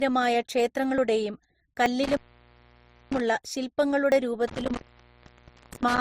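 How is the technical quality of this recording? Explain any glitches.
The technical quality is poor. Three kinds of fault are audible.

Throughout the speech there is a coarse, smeared coding texture. Two different sets of artefacts seem layered. The likely cause is transcoding between lossy codecs, which fits an MP3 encode at around 41 kbit/s followed by Opus at 32 kbit/s. The second codec spent its bits on the first codec's damage and added its own. Both textures remain.

At 0.98, 1.86 and 4.12 s there is a small jump forward. Each jump skips roughly 20 ms of sound. No silence fills the gap. These are likely dropped buffers from an overrun. The program failed to collect samples before the hardware overwrote them. The audio on either side was then joined directly.

From 2.04 to 3.20 s, the sound cuts out for about 0.95 s, with crackle at the edges. Faint hiss remains during the gap. The same happens from 4.48 s to the end, again open for about 0.94 s. 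This is intermittent contact. A loose cable or plug briefly breaks the connection, so the signal drops and the edges crackle as the contact scrapes open and closed.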